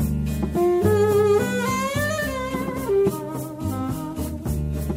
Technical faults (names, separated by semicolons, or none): none